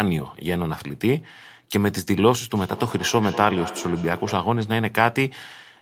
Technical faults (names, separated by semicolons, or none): feedback echo between two devices